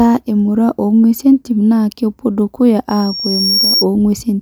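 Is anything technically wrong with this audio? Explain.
Yes. From 2.89 to 3.86 s, after "entim naa kepwo dukuya", there is loudspeaker feedback squeal. The microphone picks up its own loudspeaker, and at 5.6 kHz the loop gain exceeds one. The tone swells over roughly 0.7 s to about the level of the speech. A steady interfering whistle would be present at full strength from the start instead.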